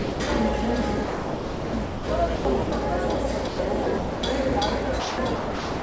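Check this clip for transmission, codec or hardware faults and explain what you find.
Two kinds of fault turn up, both tied to the sender's voice detector. The call codec passes nothing above 8 kHz, which fits a wideband G.722 link.

Sound dropped by the voice detector, 0.00 to 0.20 s. The opening sound is missing, and steady comfort noise sits in its place for about 0.2 s. The detector likely judged the onset to be background and held off sending. The receiver filled the gap with synthetic noise until sending resumed.

Sound chopped by the voice detector, at 1.04 to 2.09 s, 2.36 to 2.72 s, 3.47 to 4.22 s, and 5.00 s to the end. Within each stretch the detector switched on and off repeatedly. Quieter parts were swapped for comfort noise, about 0.93 s in total in the first stretch and 0.65 s in the last. The sound comes through choppy. Repeated misjudging of low-level sound as silence is the likely cause.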